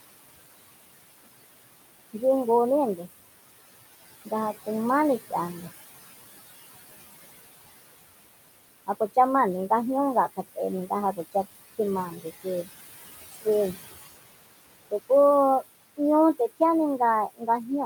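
Throughout the clip, a noise suppressor is pulling down whatever it judges to be steady background, cutting it by about 18 dB between phrases. The room noise, which sits about 14 dB below the speech, therefore drops away in the gaps and swells back underneath each phrase, so the background pumps in time with the talking.

At 12.1 to 12.26 s, and again at 17.29 to 17.48 s, the same suppressor mistakes part of the speech for noise and turns it down along with the background, by about 13 dB the first time and as much as about 21 dB the second. Each lapse lasts only a fraction of a second, but the affected sounds come out swallowed and faint, as if a soft consonant or word ending had been clipped away.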